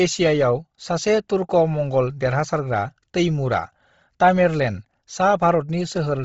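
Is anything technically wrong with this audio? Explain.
Yes. Throughout the speech, the sound is breathy and grainy, and nothing reaches above 7.7 kHz. This is likely heavy Bluetooth LC3 compression: short-frame coding at a bitrate that points to about 24 kbps discards the upper spectrum and fills it with noise.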